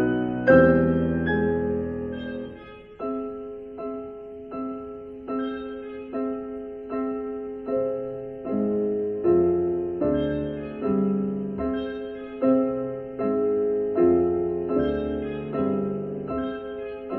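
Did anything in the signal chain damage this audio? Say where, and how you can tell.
No, nothing in the chain audibly damaged this audio; I hear nothing pointing to a problem at any stage.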